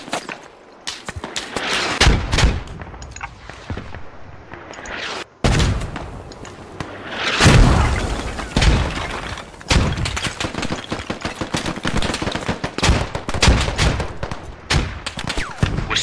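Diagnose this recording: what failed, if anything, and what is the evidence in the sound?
Nothing failed: no stage in the chain, from wiring and conversion through processing, transport and playback, leaves any audible fault in the recording.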